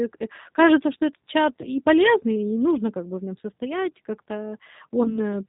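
G.729 codec coding runs throughout at 8 kbit/s: the speech is rebuilt from a filter and sparse pulses, sounding plainly rough and synthetic with nothing above 4 kHz. VoIP packet loss concealed by the speech codec occurs at 1.61–1.68 s, after "кажется что этот чат" and before "полезный и нужно как", and again at 5.03–5.19 s. Each time about 20 ms of audio went missing, and the decoder stretched its last frame into a brief fading buzzy tone or coloured noise before recovering.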